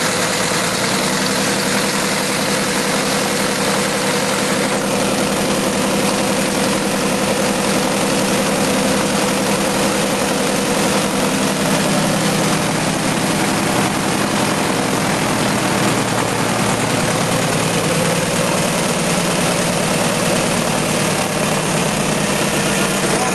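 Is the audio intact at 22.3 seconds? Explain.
No. At 22.3 s, as across the whole clip, a mains hum is present: a steady 60 Hz tone, roughly 20 dB below the wanted signal, coupled in from the power line through a ground loop or nearby transformer, heard as a constant low drone with some low harmonics.

Gain pumping runs throughout as well, with the level swinging by around 10 dB. The likely cause is input gain set far too high, with a fast limiter or compressor clamping every peak and squashing the dynamics.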